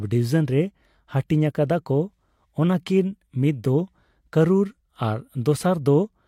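No technical faults can be heard anywhere in the recording.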